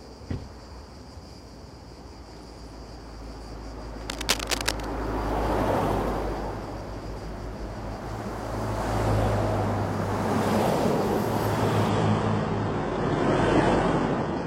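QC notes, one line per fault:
4.10–4.85 s, cable scratch noise: a dense, ragged burst of scratching and rustling sits right on top of the sound at about the same level as the signal itself. It's likely a worn cable or connector being moved, with its contact resistance jumping around fast.
11.89 s to the end, adaptive stream at a lower bitrate: the quality drops abruptly with no gap. The top end vanishes above about 10.8 kHz and codec artefacts thicken, the kind you'd expect from a stream falling back to a low-bitrate HE-AAC version when the connection slowed.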